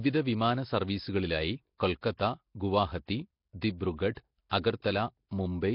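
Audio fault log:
Throughout, Nellymoser compression: the speech was likely passed through the Nellymoser Asao codec at a low rate, which fits roughly 22 kbps. That codec codes short blocks with a fixed two bits per sample, so weak bands receive no bits and are filled with noise. The damage is heavy: a rough, hissy halo surrounds the speech, its detail smears into an underwater quality, and nothing remains above 5.3 kHz.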